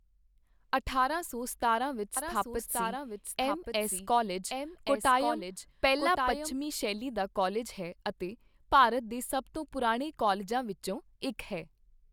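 A slower second path likely mixes in a duplicate: a doubled audio track from 2.17 to 6.55 s, after "ਅਠਾਰਾਂ ਸੌ ਸਤਾਰਾਂ ਵਿੱਚ", lagging about a second, roughly 5 dB quieter, cutting in and out abruptly.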